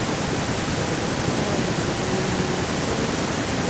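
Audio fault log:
Throughout: echo with no canceller. The speech returns about a fifth of a second later as a fainter, thinner copy, about 10 dB down, because the far end's loudspeaker feeds its microphone and nothing subtracts it. A spectrogram shows each syllable smeared into a ghostly trailing duplicate, and the waveform shows doubled envelopes.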